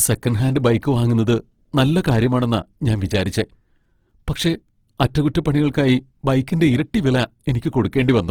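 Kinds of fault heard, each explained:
Opus compression: The speech throughout sounds rough and grainy, with a noisy texture where clean tone should be. There is little of the watery swirl that gaps in the spectrum would cause. Instead, thin parts of the spectrum seem filled with borrowed or noise-like content. This is likely a low-rate Opus music-mode encode. The audio still reaches about 20.2 kHz, so the damage is grain, not muffling. The amount of grain fits a bitrate near 16 kbps.
pre-echo: At 7.91 s a hiss comes just before a sharp attack, lasting about 16 ms. The codec spreads its coding noise across a whole block. This attack falls late in its block, so the noise sized for the loud onset also fills the quiet moment before it. The onset therefore loses its crispness and sounds smeared. The brief hiss announces it just ahead of time.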